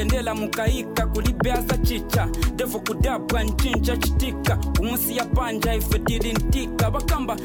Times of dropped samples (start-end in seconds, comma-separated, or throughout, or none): none